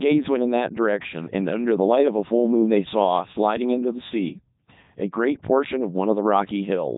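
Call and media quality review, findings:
Codec 2 vocoder, whole clip: robotic, buzzy speech, no content above 3.8 kHz. Voice resynthesised from sine waves using pitch, voicing and envelope; waveform discarded, consistent with the 3.2 kbit/s mode. Unlike simple band-limiting or a lossy waveform codec, the buzz follows pitch, not noise or smearing.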